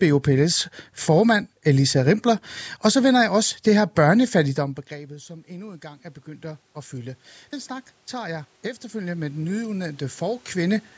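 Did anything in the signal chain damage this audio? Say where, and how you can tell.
Yes, the call processing stage. At about 4.5 s the talker moves back and the voice drops by about 24 dB. From 4.55 s to 10.89 s you can hear automatic gain rising: voice and room noise swell together, slowly, as the AGC climbs about 16 dB to compensate. That joint swell of speech and background over several seconds is the tell. The AGC treated a quieter talker as a weak input and pulled the noise floor up too.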